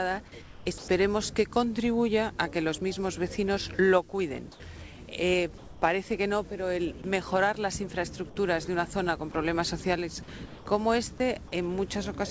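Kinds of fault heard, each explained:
Comfort noise in place of the background: At 0.42 to 0.66 s, 4.52 to 4.60 s and 5.58 to 5.82 s, the real background, about 20 to 24 dB below the loud passages, turns into a steady, featureless hiss. It drops about 6 dB in the first gap, about 3 dB in the third and barely 1 dB in the second. The likely cause is discontinuous transmission: the sender goes quiet in pauses, and the receiver fills them with synthetic noise roughly matched to the background.
Sound dropped by the voice detector: At 0.78 to 0.88 s, 7.02 to 7.04 s, 9.32 to 9.34 s and 10.46 to 10.66 s, actual sound is clipped away and steady noise takes its place before the sound returns. About 70 ms of sound goes missing in the first, about 90 ms in the last, and around 10 ms each in the two brief middle ones. The sender's voice detector likely judged these quiet moments to be background and stopped transmitting until it triggered again.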